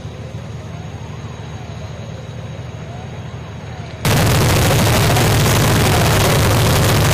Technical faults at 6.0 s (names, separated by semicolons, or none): float read as integer